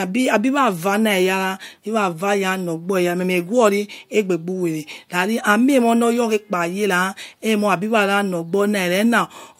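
No technical faults can be heard anywhere in the speech, and the signal holds steady throughout.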